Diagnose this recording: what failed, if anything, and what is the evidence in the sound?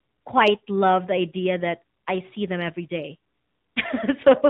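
The failure is at the codec stage. The speech has passed through the AMR narrowband mobile codec, and the damage is plainly audible for the whole clip. Nothing above 4 kHz survives, so sibilants sound dull and boxy. The voice has a buzzy, synthetic edge. The codec samples at 8 kHz and rebuilds speech from a vocal-tract model excited by a few pulses per 5 ms subframe. That coarse excitation causes the buzz. The degree of damage fits a 10.2 kbps mode.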